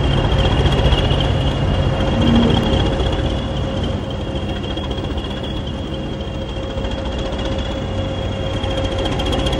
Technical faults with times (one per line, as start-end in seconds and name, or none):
2.63 audio missing between chunks
8.55 audio missing between chunks